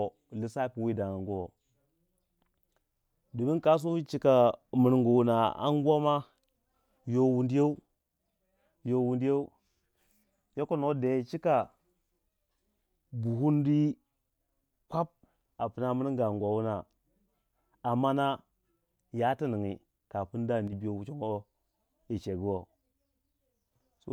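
One channel drops out at 20.68 to 20.73 s in this speech clip: for about 50 ms the level falls abruptly by about 6 dB, then recovers. The likely cause is a brief loss of one stereo channel before the mono sum, halving everything common to both sides.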